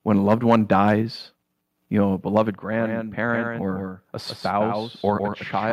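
Microphone overload from 0.29 to 0.92 s, just after "when a": the peaks run about 5 dB past the converter's limit, likely from the input volume being set too high, so their tops are sheared flat and the loudest syllables take on a harsh, crackling edge. Around 1% of samples are cut. At 1.02 s the microphone volume is stepped down by about 4 dB, likely by call software reacting to that clipping, and the whole level, background included, drops at once.

After "you know a", microphone overload returns from 2.36 to 2.42 s, about 3 dB over, with roughly 2% of samples flattened, and its likely cause is the same excessive input level. At 2.49 s the microphone volume steps down again by about 3 dB, likely the same automatic correction, another sudden drop in level.

A doubled audio track starts abruptly at 2.71 s and lasts to the end. A second full-band copy trails about 150 ms behind at about 5 dB lower, likely from a slower capture path or an edit holding two misaligned copies. 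It sounds like a dry, distinct repeat with no room colour or decay.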